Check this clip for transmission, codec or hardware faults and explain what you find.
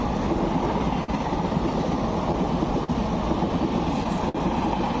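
Two timing faults are audible, on a call path that cuts off everything above 8 kHz, which fits G.722 at 64 kbps.

Clock drift between sender and receiver runs through the whole clip. The sender's clock runs slow, by roughly three percent. The receiver's buffer keeps draining. Small timing hiccups recur at uneven intervals, with brief repeats in the sound.

A short stall from a late packet occurs three times: at 1.04 to 1.10 s, 2.84 to 2.90 s and 4.29 to 4.36 s. Each time the buffer ran empty. The receiver held the last sound for 41, 39 and 55 ms, then resumed. Nothing is lost. The sound simply hangs briefly.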